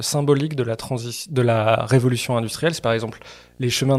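A speech clip with a faint 60 Hz buzz and hash above it, well below the speech, from 1.69 s to the end. This is video or display buzz: a screen or video cable is coupling its 60 Hz field rate into the audio.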